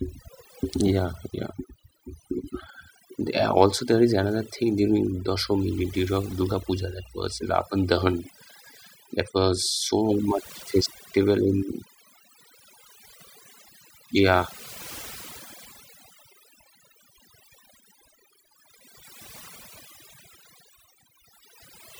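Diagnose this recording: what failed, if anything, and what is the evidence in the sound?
The failure is overdone noise removal at the call-processing stage, present for the whole speech clip. Pauses drop to near silence with twinkling specks, because bands near the noise estimate are cut hard, taking quiet speech detail with them.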